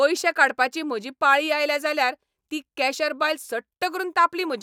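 No technical faults can be heard anywhere in the recording; the speech signal stays steady and intact throughout.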